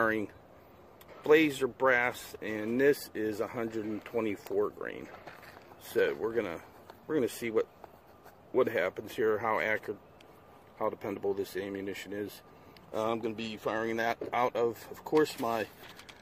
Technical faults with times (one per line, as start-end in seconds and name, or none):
none